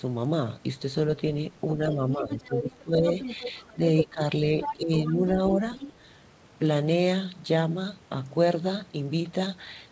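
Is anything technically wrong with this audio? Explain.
Yes, there are two kinds of fault, both clustered between about 2 and 6 seconds of this speech.

Other side's voice leaking through: A second voice sits under the speech at 1.92–4.07 s and 4.60–4.76 s, only about 5 dB below it. Fainter scraps follow at 5.07–5.12 s and 5.51–5.93 s. The likely cause is far-end loudspeaker echo left in the microphone signal by an incomplete echo canceller.

Speech suppressed in double talk: The main speech dips and partly cuts out at 1.96–3.05 s (about 10 dB down) and at 3.74–4.21 s and 4.73–5.57 s (about 15 dB down). This overlaps the leakage, consistent with the canceller attenuating both talkers during simultaneous talk.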